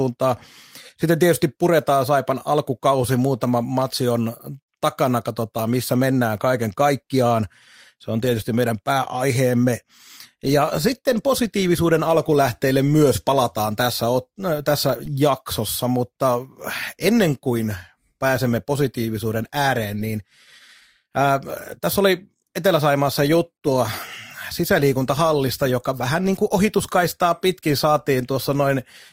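No technical faults can be heard anywhere in the speech recording.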